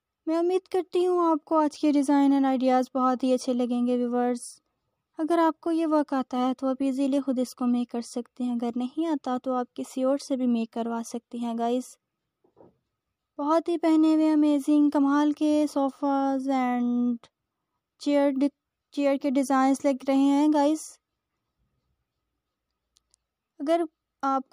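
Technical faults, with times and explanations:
Nothing stood out on listening that would call for a technical note.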